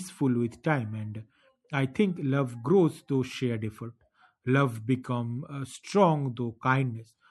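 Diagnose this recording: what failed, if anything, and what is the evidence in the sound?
Throughout the speech the sound is plainly watery, with s sounds smeared. This points to the codec stage, most likely MP3 compression at a bitrate that fits about 64 kbps, where the encoder drops weak frequency lines frame to frame.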